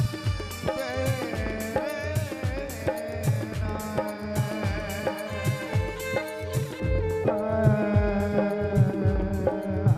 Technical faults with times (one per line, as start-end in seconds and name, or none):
6.80-9.97 de-emphasis applied wrongly